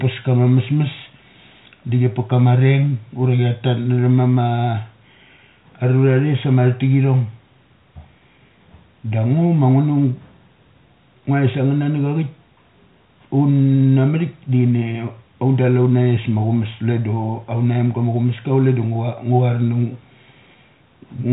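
No technical faults here.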